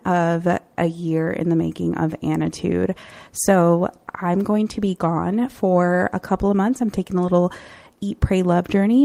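Nothing in this speech recording stands out as a technical fault, so there's nothing to place on the timeline here.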